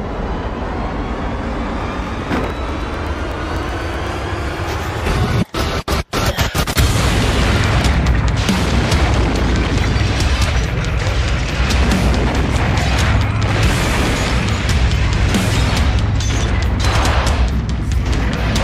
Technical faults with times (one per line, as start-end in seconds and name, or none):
1.69-8.31 periodic USB or driver dropouts